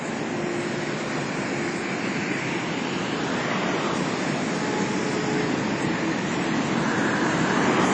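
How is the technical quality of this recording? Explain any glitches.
The technical quality is poor throughout, with clearly audible lossy-codec damage from start to finish. Across the whole clip the sound is ringing and washy, with a hiss that swells and fades along with the signal, and nothing is present above about 10.1 kHz. This is likely WMA compression at a low bitrate, around 32 kbps. Its long transform blocks smear quantisation noise over tens of milliseconds, and weak spectral lines are discarded. A plain low-pass filter would cut the top without this breathing, smeared grain.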